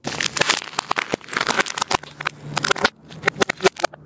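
Gain pumping runs throughout: the level swings by around 20 dB, ducking under each loud sound, likely from a fast limiter fighting excessive microphone gain. The waveform looks squashed. The call microphone processing cuts everything above 8 kHz.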